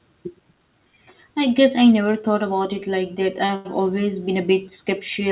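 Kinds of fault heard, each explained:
Short stall from a late packet: a packet showed up late, so the jitter buffer ran dry and the receiver held the last sound until it arrived. That happens twice, about 30 ms and then 92 ms, near 3.46 and 3.56 s, with nothing actually lost, just stretched and slightly buzzy.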